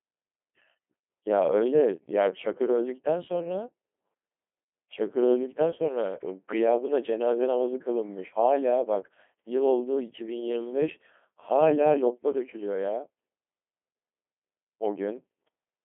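Throughout, a Codec 2 vocoder, at what fits 2.4 kbit/s, resynthesises the speech from sine waves. It sounds heavily robotic and buzzy, confined to 250 Hz–3.4 kHz.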